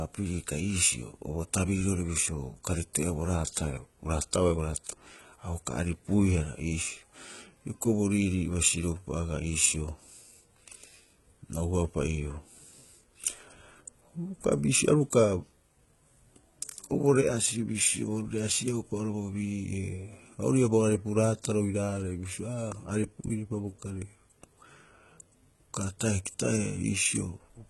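Throughout the speech, s sounds come out gritty and lispy, and the treble has a metallic sheen that stops dead at about 11.8 kHz. The likely cause is heavy HE-AAC compression, with upper bands copied from lower ones, which fits a bitrate around 16 kbps.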